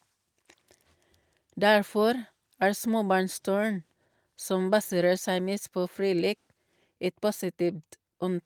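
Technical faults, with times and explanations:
Nothing technical stands out here; the speech comes across without any audible faults at any point.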